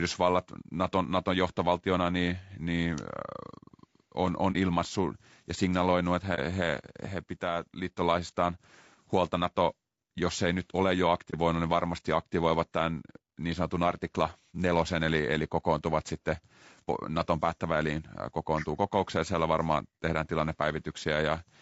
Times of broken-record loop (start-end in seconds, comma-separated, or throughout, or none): none